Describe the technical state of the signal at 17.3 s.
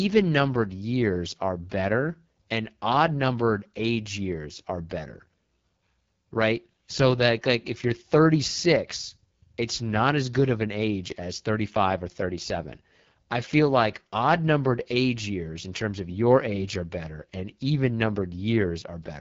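At 17.3 s the speech is passing through the AMR wideband (HD Voice) codec, as it does for the whole clip, at a low rate that fits the 8.85 kbit/s mode. With so few bits for the pulse excitation, the voice turns rough and raspy, with nothing above 7.6 kHz.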